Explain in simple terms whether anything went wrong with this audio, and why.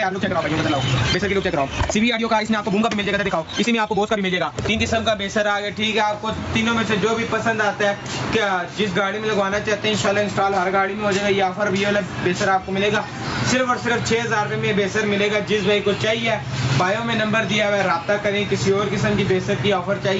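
For the first 4.8 seconds, the audio races along at about 1.81 times its natural pace, yet the pitch stays where it should. It sounds rushed, and then the pace drops back abruptly to normal. This is a time-stretched section. Software likely squeezed that stretch to fit a shorter length, dropping tiny slices so the pitch wouldn't rise, which causes the jumpy, hurried feel.

All the way through, the level keeps getting pulled down whenever something loud comes in, so the level seems to breathe. Loud and soft parts end up close together, leaving the sound flat and squashed. This is gain pumping. The likely cause is the input level being set far too high, with an automatic limiter rapidly pulling it down on every loud sound and letting it spring back afterwards. The call path's normal trimming of the very top treble is also audible.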